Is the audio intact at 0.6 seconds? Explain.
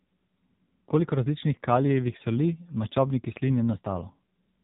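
No. At 0.6 s the speech carries AMR narrowband mobile codec damage, which runs through the whole clip rather than just this moment. The codec rebuilds the voice from a vocal-tract model excited by sparse pulses, so here the speech sounds buzzy and synthetic, and nothing above 3.8 kHz survives, leaving it muffled. The damage is heavy, which points to one of the codec's low modes, around 6.7 kbps.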